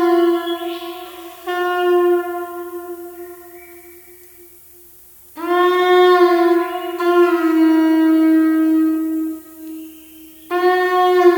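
A steady, thin hiss runs through the whole audio, rising sharply toward the top of the band. This is low bit depth with noise shaping: the signal is quantised to 8 bits, and the rounding error is pushed upward in frequency, leaving the noise roughly 25 dB below the signal.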